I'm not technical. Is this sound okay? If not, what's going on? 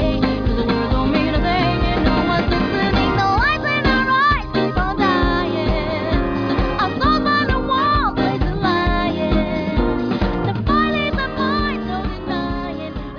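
Yes, nothing wrong here.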